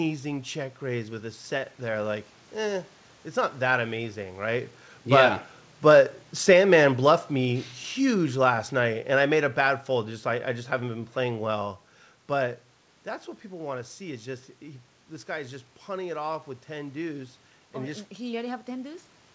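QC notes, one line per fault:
5.00–9.88 s, automatic gain falling: after "not that amazing right", sound and background sink together by about 7 dB as the gain control gradually eases down its gain on an input it found too loud or too noisy.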